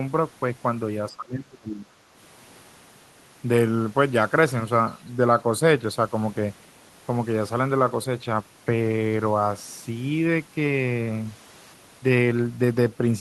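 From 1.12 to 1.94 s, the echo canceller likely mistook both ends talking at once for loudspeaker echo and clamped down on the near side. The result is speech suppressed in double talk: the speech sinks by some 25 dB at worst and is turned down for most of that span.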